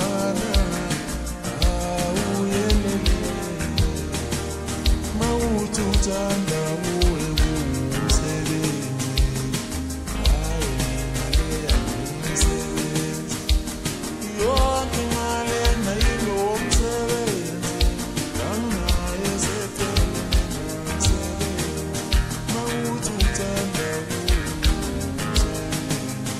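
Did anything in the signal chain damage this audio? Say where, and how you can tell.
No, nothing in the signal chain has damaged this audio. No stage, from the wiring through to playback, leaves any audible trace at any point in the clip.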